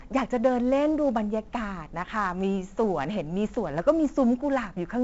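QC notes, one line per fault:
Throughout, 4-bit ADPCM compression: coarse adaptive 4-bit steps leave heavy gritty hiss riding loud speech, roughened attacks, nothing above 7.7 kHz, fitting a 64 kbps stream.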